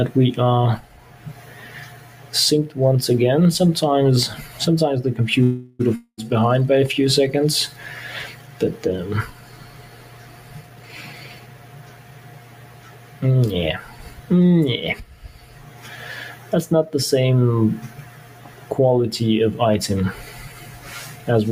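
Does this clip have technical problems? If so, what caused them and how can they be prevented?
Yes. A speech-tuned noise suppressor was left on for this non-speech audio. It treats held and fading sound as noise, so the level pumps by around 10 dB throughout. Prevent it by switching to a music mode or turning suppression off.

The noise suppressor also cut specific sounds by about 5 to 6 dB at 0.82–2.33, 8.33–8.6, 9.33–13.22, 13.92–14.3, 15.11–15.85, 16.36–16.52 and 17.89–18.7 s, with sustains sinking and decays clipped. The same fix applies: disable speech suppression for this material.

At 5.43–5.81 s there's a call audio freeze: a 360 ms fading fill, after which the sound picks up where it stopped, so nothing's lost. Delayed packets likely drained the jitter buffer. A larger jitter buffer or a steadier network path would help.

A long network dropout follows at 5.95–6.25 s. About 220 ms is concealed, including roughly 70 ms of silence, and the audio then resumes further on, with that stretch gone. 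It was likely caused by packets lost in transit. Better connectivity or forward error correction would prevent it.

From 10.6 to 12.19 s a jitter buffer speed-up plays the audio at 123% speed with unchanged pitch. It trims roughly 400 ms to catch up after a backlog, so it sounds hurried. Gentler buffer adaptation would keep the timing steadier.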